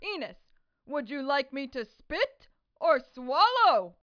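No technical faults are audible.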